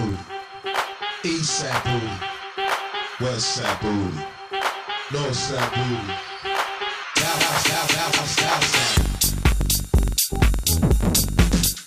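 Throughout the clip, a filter restarted on every block produces a steady ticking buzz at 21.5 Hz, which fits a 2048-sample block. The filter drops its memory at each boundary and starts from silence, so each block opens with a small transient whose strength rises and falls with the signal level.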